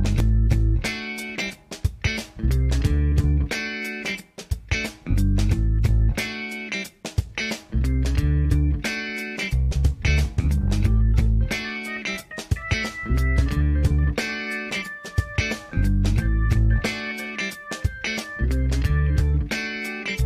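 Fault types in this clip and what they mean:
Nothing here to flag; the audio runs along without any technical faults turning up.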